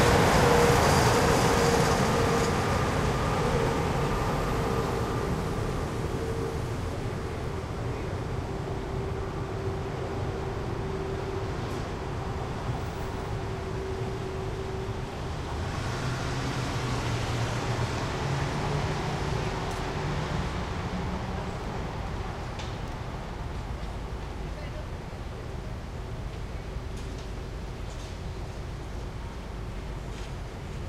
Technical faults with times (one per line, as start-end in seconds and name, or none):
7.36-7.48 chunks out of order
21.60-21.68 chunks out of order
22.88-22.96 chunks out of order